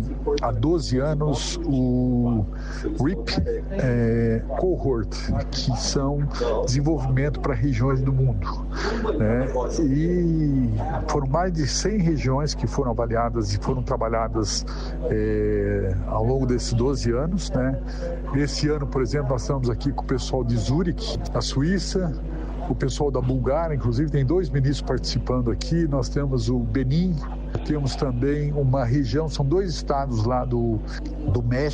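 A steady, low drone sits under the sound from start to finish, pitched at 50 Hz and only a few decibels below the material itself. This is mains hum, where power-line current leaks into the signal, likely through a ground loop or a nearby transformer.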